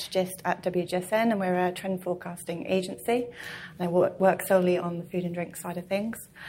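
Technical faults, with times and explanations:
No technical fault can be heard anywhere in the signal.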